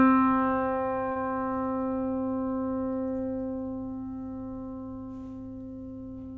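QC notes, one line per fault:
1.12–1.23 s, short stall from a late packet: a packet arrived late and the jitter buffer ran dry. The receiver held the last sound for about 38 ms, then resumed where it stopped. Nothing is lost, but that sound lingers slightly too long, over a band that ends at 8 kHz.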